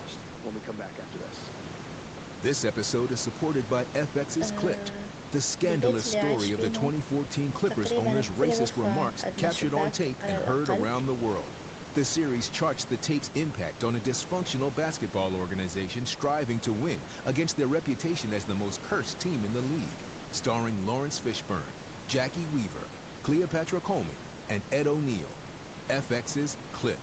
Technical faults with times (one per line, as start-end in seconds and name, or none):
none